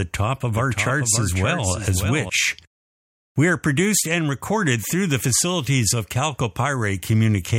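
Speech with a doubled audio track from 0.58 to 2.30 s, after "top of": a full-band copy about 5 dB quieter trails by roughly half a second, likely from a second, slower capture path. On a spectrogram, the harmonics reappear shifted in time with no decay, and the copy starts and stops abruptly.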